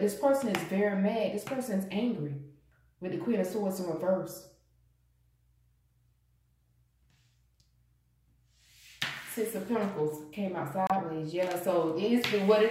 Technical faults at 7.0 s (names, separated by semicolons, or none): none